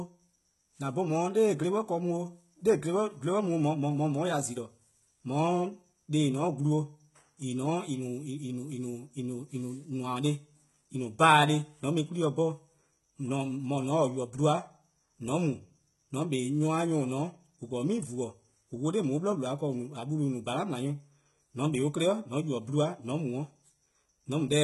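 HE-AAC compression, present throughout the speech. The top of the spectrum is hollow and synthetic, with nothing at all above about 11.8 kHz, and the damage is heavy, which fits a bitrate around 16 kbps. The likely cause is spectral band replication. Only the lower band is really coded, and the treble is rebuilt by copying lower content upward under a coarse envelope, so harmonics don't line up, and s sounds come out gritty, lispy and metallic.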